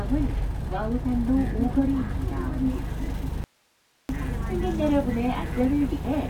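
At 3.44 s the sound abruptly cuts to hiss roughly 40 dB down for 0.65 s, likely an audio dropout to a faint residue. On a waveform it appears as a flat near-silent gap; on a spectrogram, a low broadband noise band.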